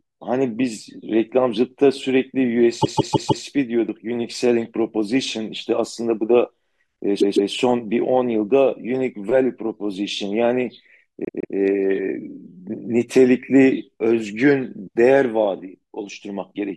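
Speech that stutters three times. At 2.81 s a 156.7 ms stretch replays four extra times until 3.44 s, and at 7.20 s and 11.25 s a stretch of the same length replays twice more. These are repeated frames: a block that fits six compressed frames was sent again, lengthening the audio.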